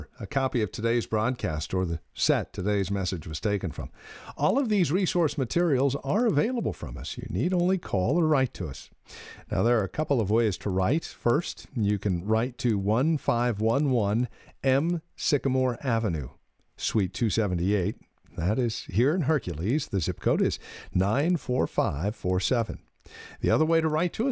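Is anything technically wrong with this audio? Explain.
Yes. Throughout the speech, the resampler restarted on every block, which fits a 48 kHz to 16 kHz conversion run in separate 100 ms chunks. Each block edge lacked its true neighbouring samples, leaving a small error there, heard as steady ticks at 10 per second whenever speech is present.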